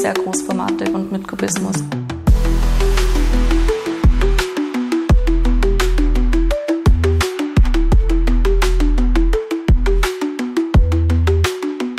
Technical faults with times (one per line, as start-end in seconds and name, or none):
none